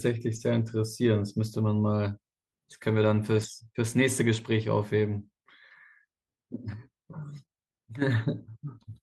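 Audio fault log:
0.35–0.37 s, 3.27–3.45 s, 7.33–7.43 s: lost packet rebuilt from error correction. Packets went missing, but later packets carried low-bitrate copies that the decoder played instead. The speech continues without a gap, but rougher and noisier for about 20 ms, 100 ms and 60 ms.
7.45–7.50 s: short concealed packet loss. About 20 ms of speech arrived too late, so the receiver extended the preceding sound for about 22 ms and blended back into the real audio. This is heard as a brief smear or wobble.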